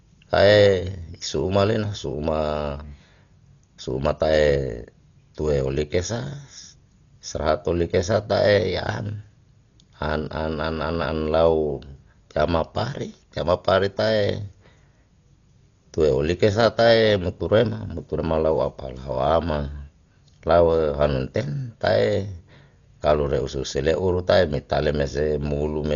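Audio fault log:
Throughout: Dolby Digital compression, likely. The speech is heavily damaged and dull, with nothing above 6.9 kHz. Rough, fluttering noise surrounds tones where starved frequency lines were refilled with dither, which fits a 40 kbps stream. A plain low-pass would remove highs without that grain.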